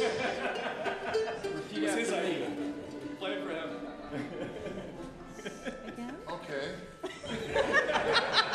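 No technical faults can be heard anywhere in this clip.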